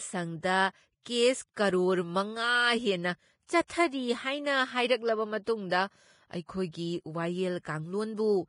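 Speech with heavy Vorbis compression damage throughout. Nothing is present above 10.5 kHz, and the remaining treble is hissy and grainy: the encoder has quantised the high-frequency residue so coarsely that the detail has turned into noise of similar energy sitting on the smooth spectral floor. Voiced tones sound roughened and consonant attacks are smeared. The degree of damage points to a low bitrate of roughly 28 kbps, likely from Vorbis encoding at a low quality setting.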